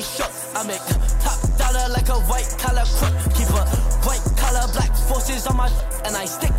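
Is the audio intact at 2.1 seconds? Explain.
Yes, the audio is intact at 2.1 seconds, with no fault of any kind audible at that moment.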